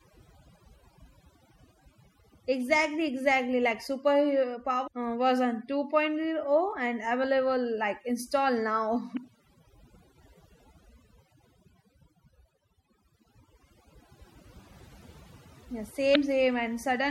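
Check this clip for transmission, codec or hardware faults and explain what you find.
Three faults are present: heavy-handed noise reduction and lossy-codec damage across the whole speech clip, plus three brief corruption glitches.

Overdone noise removal runs throughout. The processor pushed individual frequency bands down or out whenever they sat near its noise estimate, and quieter parts of the voice were cut along with the hiss. Pauses drop to near silence scattered with twinkling specks. On a spectrogram the background becomes dark, with isolated bright dots flickering in and out, and the voice's weaker harmonics break up into patchy fragments.

The whole clip also has plainly audible codec damage: a swirly, watery quality on the speech and smeared consonant onsets. The likely cause is MP3 compression, and the degree of damage fits a low bitrate of around 64 kbps. The encoder ran short of bits, so it zeroed weak spectral lines, which then switch on and off from frame to frame. 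A spectrogram would show a blocky, holed texture.

Damaged data in a compressed stream appears at 4.86 s, from 9.13 to 9.18 s, and from 16.12 to 16.17 s. Each time the decoder hit corrupted frames, lost sync and searched for the next valid frame header. The result is a short chirp or blip. On the waveform each event is a brief discontinuity, and on the spectrogram it shows as a narrow vertical smear or a gap that breaks the surrounding pattern.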